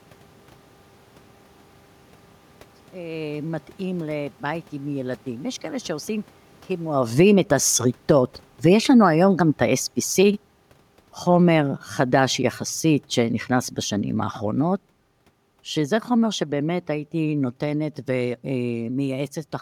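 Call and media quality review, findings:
Automatic gain falling. Level sinks at 6.81–7.41 s (about 8 dB), 7.95–10.42 s (about 5 dB), 11.21–14.84 s (about 6 dB), 15.77–19.2 s (about 4 dB). Room noise drops with speech. Capture AGC cutting gain on loud input or strong background noise. Talker movement near 7 s.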